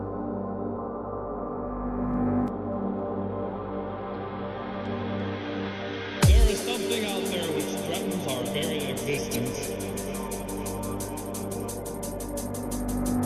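At 9.32 to 9.36 s, a span of about 44 ms, the audio shows damaged data in a compressed stream. Bytes in the encoded stream were corrupted at that point, so the decoder misread or discarded the affected frames and had to resynchronise on the next valid frame header before playback continued.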